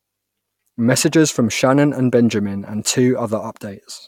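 No technical faults can be heard anywhere in the recording.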